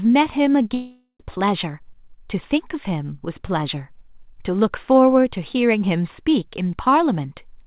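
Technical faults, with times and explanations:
0.74–1.21 s, long network dropout: the sound smears into a fading buzz for about 0.45 s, then about 80 ms of silence, and speech resumes with roughly 0.46 s missing, likely from stalled packets. Unlike a brief concealment blip, this stretch is lost outright.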